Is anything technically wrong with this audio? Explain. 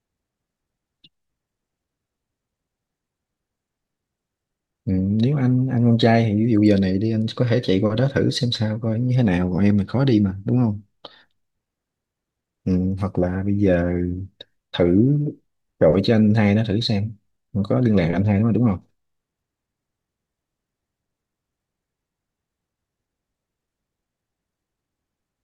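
No, nothing technical stands out here; it's just the speech coming through without any faults to point to.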